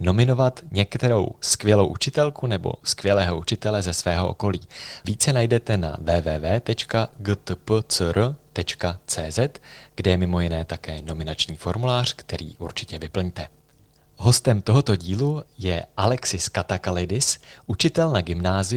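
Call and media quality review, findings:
No faults found in this speech clip. Nothing to raise against any component in the call or media path.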